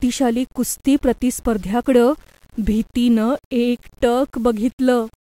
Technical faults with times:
0.00-5.23 low bit depth without dither

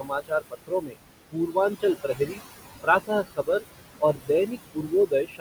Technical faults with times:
0.00-5.40 noise suppressor artifacts
0.00-0.97 speech cut by the noise suppressor
1.31-2.42 speech cut by the noise suppressor
3.07-3.64 speech cut by the noise suppressor
3.99-5.40 speech cut by the noise suppressor

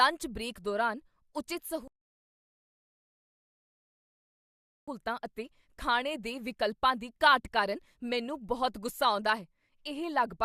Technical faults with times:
1.88-4.88 rebuffering stall

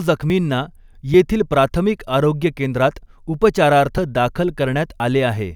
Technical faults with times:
0.30 dropped buffer (overrun)
1.14 dropped buffer (overrun)
3.98 dropped buffer (overrun)
5.00 dropped buffer (overrun)

